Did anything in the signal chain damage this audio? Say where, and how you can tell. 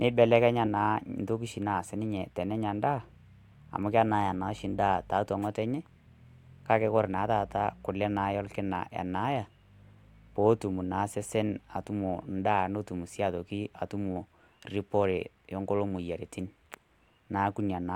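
No, nothing in this speech recording stood out on listening as a sign of damage at any stage of the chain.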